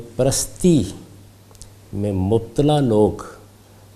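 No technical faults can be heard anywhere in this audio. Nothing in it points to a problem with how the sound was captured, processed or delivered.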